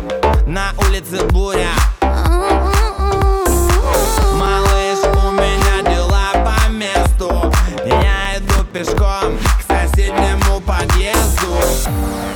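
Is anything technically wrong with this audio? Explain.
Yes. Processor overload crackle occurs from 4.05 to 4.47 s and from 8.25 to 8.98 s. Buffers of a few milliseconds miss their deadlines in quick succession, leaving about 10 and then about 20 tiny silent gaps. Unlike a single dropout, this sounds like a dense, gritty tearing that stops once the load passes.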